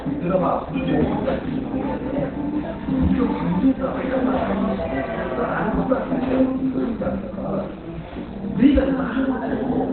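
Throughout the clip, the audio shows heavy Opus compression damage, likely from a narrowband SILK-mode encode at a very low bitrate, roughly 12 kbps. Nothing is present above 4.3 kHz, so the sound is muffled, dull and hoarse.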